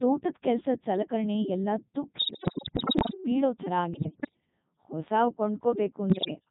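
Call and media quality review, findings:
Codec 2 vocoder across whole clip: robotic, buzzy speech with heavy artefacts. The waveform is not preserved. The decoder rebuilds the voice from sine waves using only pitch, voicing, energy and a coarse spectral envelope, so natural texture is gone. Buzz character and density fit the top 3.2 kbit/s mode. Probable component: low-rate digital-radio vocoder in the voice path.

Bit errors on digital voice radio at 2.18–3.14 s, 3.94–4.40 s and 6.10–6.36 s. Synthetic voice jumps in pitch, level and tone colour, and breaks into warbles, bleeps and garbled robotic sound. The first burst is the worst, with roughly one bit in seven flipped. The later two are milder, at about 7 and 10 percent. Mechanism: corrupted bits alter per-frame pitch, voicing, energy and spectrum parameters, typical of fringe-coverage reception. Probable component: radio link feeding the vocoder.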